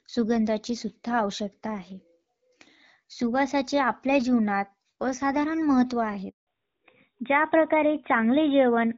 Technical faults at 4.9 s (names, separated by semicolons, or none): none